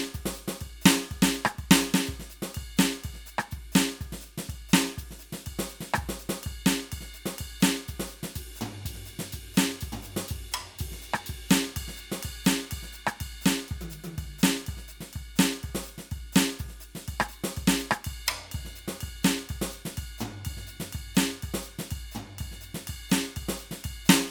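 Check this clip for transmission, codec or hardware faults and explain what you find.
The music comes through with no faults from transmission, encoding or playback hardware that a listener can pick out.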